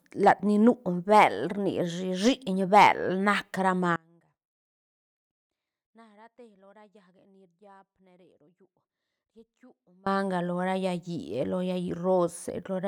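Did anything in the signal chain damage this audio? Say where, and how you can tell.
Yes. Hard clipping hits the speech at 0.27 to 0.31 s, 1.15 to 1.24 s and 2.76 to 2.89 s. The peaks crackle. They were driven about 3, 2 and 5 dB past the limit, so a converter or gain stage flattened them.

An audio dropout to a faint residue runs from 3.96 to 10.06 s, about 6.1 s. The speech cuts off abruptly. Only a faint trace remains, far below normal level. The likely cause is a break in the analogue wiring while later stages stayed live.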